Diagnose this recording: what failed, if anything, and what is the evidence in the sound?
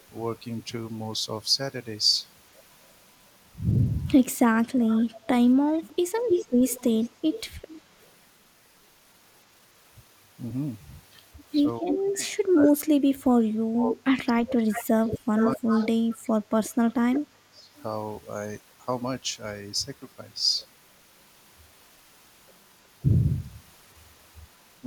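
Echo leak, call processing stage: from 4.65 to 8.07 s a delayed copy of the speech trails the talker by 241 ms at about 10 dB below it. A brief scrap returns at 11.88 to 11.95 s at about 5 dB down, and from 14.72 to 17.83 s the copy arrives 363 ms late at about 10 dB down. The likely cause is a loudspeaker-side echo canceller leaving residual pickup.

Speech suppressed in double talk, also call processing: at 5.7 to 6.12 s the speech dips by up to roughly 20 dB for a fifth of a second. From 11.8 to 17.75 s it is pushed down by as much as 30 dB for around five seconds in total, and it drops again, by roughly 15 dB, at 24.81 to 24.87 s. The first two of these coincide with the echo activity, which points to a canceller that likely could not separate near speech from echo and attenuated both.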